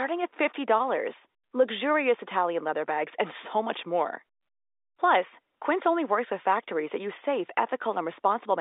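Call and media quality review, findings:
No faults found: the speech is carried over G.711 A-law telephone coding at 64 kbps, band-limited to the usual 300 Hz to 3.7 kHz line range, with any codec damage faint at most.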